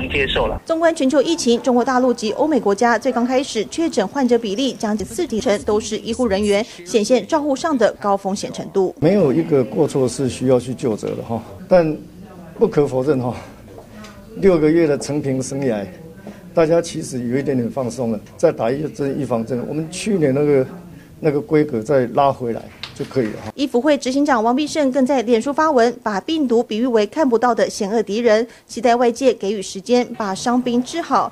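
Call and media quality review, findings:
Chunks out of order, 5.0 to 5.4 s. Brief jumbled stretch with three hard joins. One 100 ms chunk plays three chunks late, after the three that should follow it. Nothing missing, only misordered. Probable component: jitter buffer or write queue releasing chunks without sequence checking. Three discontinuities at the joins.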